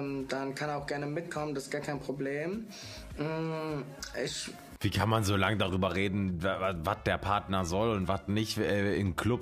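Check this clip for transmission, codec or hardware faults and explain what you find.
No transmission, codec or hardware faults are audible anywhere in the clip.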